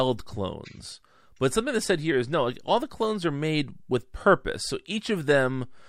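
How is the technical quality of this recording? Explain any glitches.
No glitches can be heard anywhere in the recording. There are no technical faults to explain.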